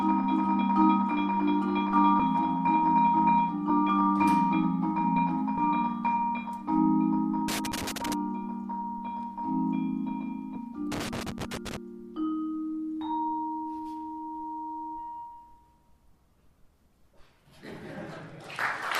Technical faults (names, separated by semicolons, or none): compressed frames skipped; loose connector crackle